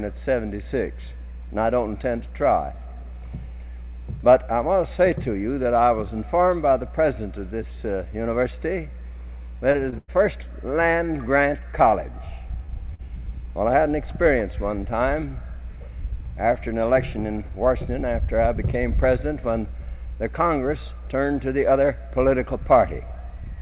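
Short concealed packet loss at 9.72, 9.90, 12.66 and 12.94 s: 20 ms of audio, or 40 ms at 12.94 s, arrived too late to decode, so the receiver extended the preceding sound and crossfaded back, leaving a brief smear or wobble.

A burst of packet loss from 9.98 to 10.10 s leaves about 100 ms missing. The receiver sustains the last sound while fading it, giving a held buzz or dying hiss, then jumps ahead. Throughout, the band stops at 4 kHz, which fits a narrowband G.711 call path.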